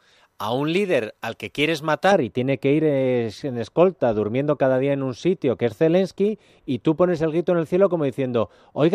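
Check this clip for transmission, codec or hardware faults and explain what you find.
There's one fault here, a case of de-emphasis applied wrongly. From 2.12 s, right after "líder al que quieres", to the end, a treble cut lands on speech that never had pre-emphasis, sloping off smoothly to about 11 dB down at 10 kHz, so everything turns dull and muffled.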